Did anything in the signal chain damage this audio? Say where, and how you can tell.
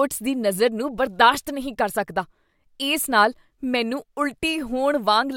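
No, nothing in this speech recording stood out as damage from any stage of the chain on listening.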